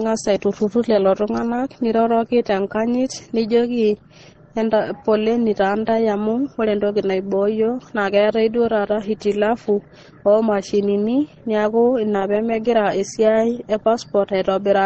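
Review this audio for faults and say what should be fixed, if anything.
The speech runs dull from start to finish, with nothing above about 8.4 kHz, and two different kinds of codec smear sit on top of each other. That layering is most likely transcoding between lossy codecs. The character fits an Opus encode at very low bitrate, around 16 kbit/s, later re-encoded to MP3 near 40 kbit/s. The MP3 stage wastes its bits on the first codec's artefacts and adds its own. To avoid this, go back to the original source and encode it once, at a decent bitrate.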